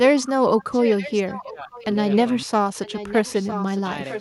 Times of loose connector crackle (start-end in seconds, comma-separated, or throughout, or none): none